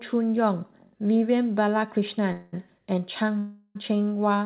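A likely stall in packet delivery let the jitter buffer run dry twice in this speech clip, carried over a narrowband call path with nothing above 4 kHz. Each call audio freeze fills the gap by stretching the last sound into a fading buzz or hiss: from 2.32 to 2.55 s (about 0.2 s) and from 3.39 to 3.77 s (about 0.37 s). The speech then resumes where it stopped, with nothing lost, so it runs later after each pause.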